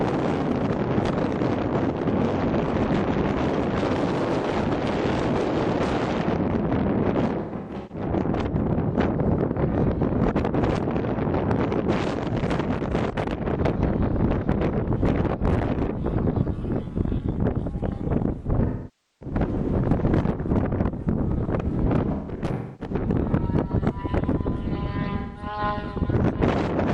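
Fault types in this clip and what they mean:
AAC frame loss with concealment: missing frames rebuilt from the last good spectrum, causing four brief smeared patches that show as blurred, frozen spectrogram blocks.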